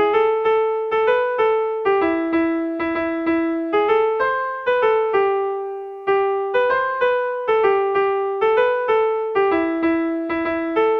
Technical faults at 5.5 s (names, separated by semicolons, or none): none